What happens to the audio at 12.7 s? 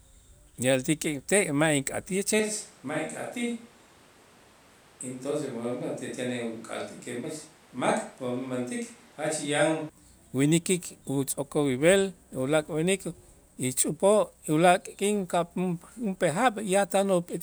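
Nothing goes wrong at 12.7 s: the speech there comes through intact, with no dropout, click, distortion or other fault at that moment.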